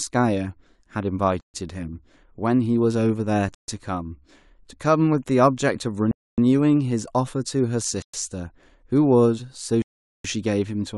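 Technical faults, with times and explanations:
1.41 to 10.25 s, Bluetooth stall: the speech drops to silence five times, at 1.41 s (133 ms), 3.55 s (135 ms), 6.11 s (267 ms), 8.02 s (113 ms) and 9.82 s (424 ms), then resumes where it broke off. The likely cause is radio interference holding up packets until the headphone buffer emptied, so playback halted outright rather than fading, and it restarted only once the resent data arrived. The gaps vary irregularly in length rather than repeating at a fixed rate.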